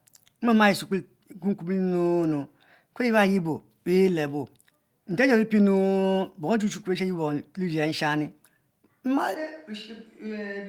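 At 9.35 s the recording likely switches to a distant microphone; the voice suddenly turns roomy and thin, about 10 dB quieter, to the end.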